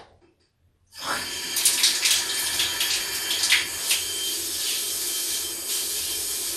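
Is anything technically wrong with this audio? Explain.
Yes. Throughout the clip the sound is dull and muffled, with a gurgling, granular roughness that is plainly audible and upper frequencies that seem to flicker in and out. This points to MP2 compression, likely at a low bitrate that fits around 80 kbps. MPEG Layer II divides the signal into 32 sub-bands and shares out a limited bit budget among them. When bits run short, whole upper bands drop out and the remaining ones are coarsely quantised.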